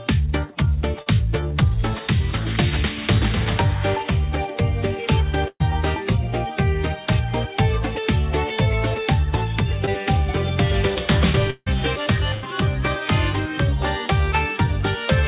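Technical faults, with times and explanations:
1.02–1.08 s and 9.86–9.89 s, short concealed packet loss: A brief smear or wobble where about 40 ms and then 20 ms of audio never reached the decoder. The receiver extended the preceding sound to cover each hole before blending back into the real signal.
5.48–5.62 s and 12.34–12.44 s, burst of packet loss: The sound stretches into a held buzz or hiss that fades, then jumps ahead. About 120 ms and then 80 ms were lost, concealed by continuing and attenuating the last sound. In the first gap this decays to about 40 ms of silence.
11.50–11.68 s, long network dropout: The sound drags on as a fading buzz or hiss, drops to about 30 ms of silence, then resumes further along with roughly 160 ms gone. This is likely a stretch where nothing arrived from the network, with concealment filling most of it.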